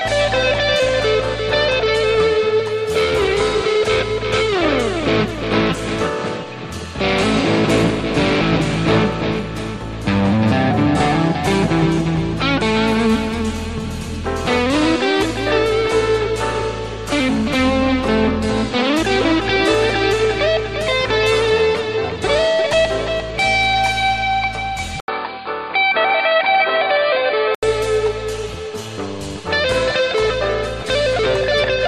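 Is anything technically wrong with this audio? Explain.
Yes. From 25.00 to 27.63 s the input likely switched to a poorer device. Its narrower band cuts everything above 4.8 kHz, so after an 80 ms silence the sound turns dull and boxy at unchanged level, with a faint new noise floor far beneath it.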